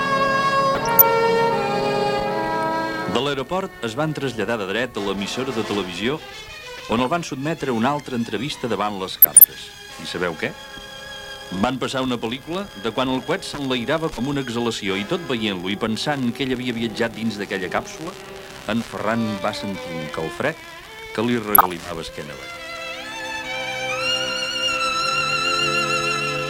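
The audio carries four short bursts of DAB burbling, at 0.75 to 1.02 s, 6.77 to 7.07 s, 9.17 to 9.44 s and 21.47 to 21.81 s. Each lasts about a third of a second. Weak reception lets bit errors, roughly 0.4 percent, slip past error correction. Corrupted samples then put short blips of noise in single MP2 sub-bands, and corrupted scale factors make sub-bands jump in level. Each burst fits around a dozen damaged frames.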